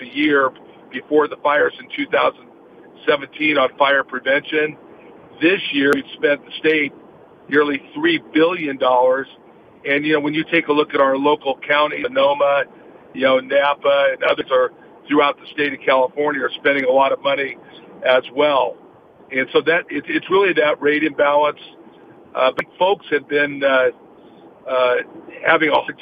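Damaged data in a compressed stream at 5.93, 12.03, 14.40, 22.59 and 25.88 s: corrupted bytes make the decoder lose frame sync, each time leaving a brief chirp or blip.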